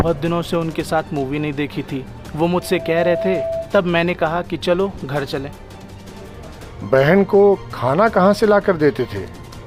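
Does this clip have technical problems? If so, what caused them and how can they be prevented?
Yes. A loudspeaker feedback squeal runs from 2.60 to 3.75 s. The microphone picks up its own loudspeaker, and at 661 Hz the loop gain exceeds one, so that tone swells within roughly 0.4 s to about the level of the surrounding sound. Lowering gain, separating microphone and loudspeaker, or notching 661 Hz prevents it.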